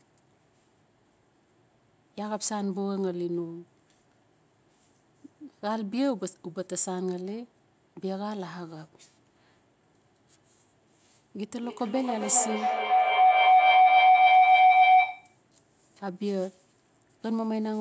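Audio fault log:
11.53–15.46 s, feedback howl: a tone around 700 Hz swells to about 12 dB over the speech, pulsing roughly every third of a second. Two devices in one room are feeding each other, each trip round the loop adding gain until it's cut.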